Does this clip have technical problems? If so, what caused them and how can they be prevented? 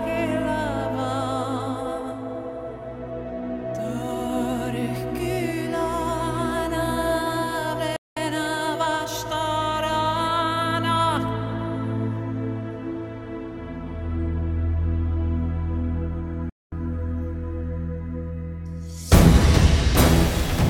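Yes, playback stalls cut the sound to silence from 7.96 to 8.17 s and from 16.50 to 16.72 s. That is likely a starved or blocked player, a clean pause rather than crackle. A larger playback buffer and a player thread that is never blocked would prevent this.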